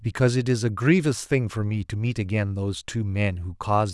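A speech recording with no technical faults to point to. Nothing in it needs a time or a cause.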